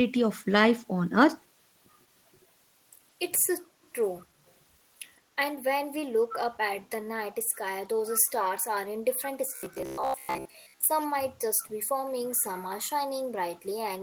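From 4.19 to 4.25 s, and again from 6.31 to 6.36 s, a brief echo leak trails the speech by 159 ms, faint the first time and much stronger the second. A far-end echo canceller likely let loudspeaker pickup through. Unlike room reverberation, it is a distinct late copy rather than a smooth tail.

From 9.56 to 10.87 s, robotic sound from repeated short buffers turns the speech into a metallic buzz at 66.8 Hz, which fits chunks of about 15 ms being replayed in place of most of the real audio. This is likely late-arriving audio. Unlike dropouts, it never goes silent.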